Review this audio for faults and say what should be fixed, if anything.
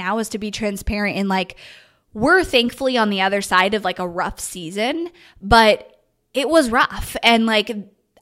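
Nothing here needs fixing; I listened through and didn't catch any technical faults in the recording.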